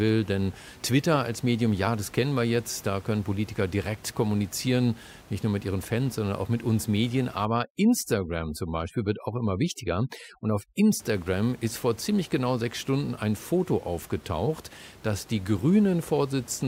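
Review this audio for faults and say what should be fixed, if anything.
From 7.45 to 11.00 s, just before "ist vor ziemlich genau", there's overdone noise removal: the reducer clamps bands near its noise estimate, so the room noise, sitting about 24 dB under the speech, collapses into twinkly near-silence. Back the reduction strength off, or re-estimate the noise profile, so it only trims the floor instead of carving out the quieter parts of the speech.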